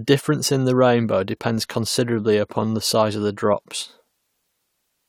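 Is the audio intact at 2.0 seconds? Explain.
Yes, at 2.0 seconds the speech plays through cleanly with no audible fault.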